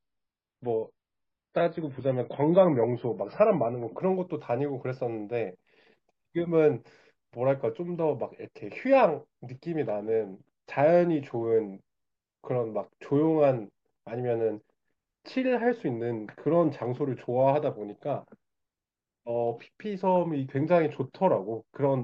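A speech clip opening with an adaptive stream starting at a low bitrate: until 4.0 s nothing sounds above 5.5 kHz and codec artefacts are heavy, fitting a very low MP3 rate. The sound then sharpens abruptly with no gap or dropout, which sets it apart from a stall.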